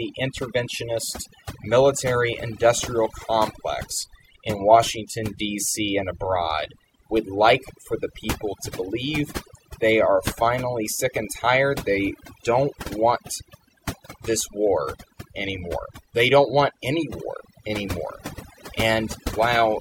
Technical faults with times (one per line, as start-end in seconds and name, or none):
0.00-19.80 overdone noise removal